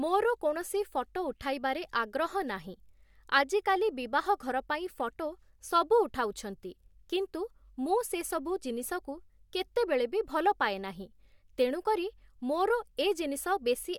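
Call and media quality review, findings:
Nothing to flag on this speech recording; no dropouts, glitches or level problems turned up anywhere along the way.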